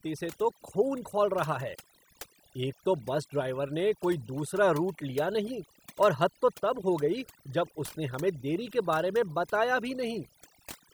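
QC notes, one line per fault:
Throughout: overdone noise removal. The noise reduction was set far too aggressive for the noise it was working against, so any frequency band sitting close to its idea of the noise floor gets pushed right down or shut off, and the softer parts of the speech are caught along with the noise. Between phrases the background drops and breaks up into twinkling specks.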